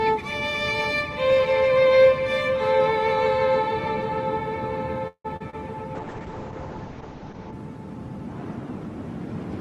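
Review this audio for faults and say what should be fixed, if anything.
From 5.07 to 5.26 s the sound stalls: it trails off as a fading continuation, then about 80 ms of silence, and resumes where it left off with nothing lost but about 171 ms of added delay. This is a call audio freeze, likely from packets held up in transit until the jitter buffer ran dry. Prevent it by giving the jitter buffer more headroom on paths with bursty delay.

Two short concealed packet losses follow, at 5.36 to 5.42 s and 5.50 to 5.55 s, heard as brief smears where the receiver extrapolated the preceding sound to cover about 40 ms and 20 ms of missing audio before blending back. Prevent these by enabling in-band FEC or redundancy on the lossy link.

From 5.96 to 7.59 s a call bitrate drop takes the encoder from 32 to 7 kbps, holding the lowest rate for about 1.55 s. Coarser coding roughens the sound, and the audio bandwidth shrinks from 12 kHz to 8 kHz, dulling it. 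Prevent this by tuning congestion control to back off less sharply on brief estimate dips.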